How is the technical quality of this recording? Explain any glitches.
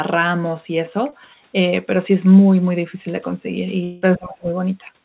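The recording has three audible glitches. The sound is also narrowband, with nothing above 4 kHz, which points to a G.711 telephone-grade codec.

At 1.10 to 1.14 s there is a short concealed packet loss. About 20 ms of audio arrived too late to use. The receiver extended the preceding sound to bridge the gap, then blended back. You hear a brief smear or wobble.

From 3.84 to 4.04 s the sound turns into a fading, synthetic-sounding continuation for about 180 ms. There is no true silence. This is likely a long network dropout. The receiver kept stretching the last audio until real packets returned, and the lost stretch never plays.

From 4.18 to 4.51 s the level dips sharply, by up to about 25 dB, over roughly 0.3 s. This is likely speech suppressed in double talk. The echo canceller heard both sides at once and turned this talker down, so the voice dips.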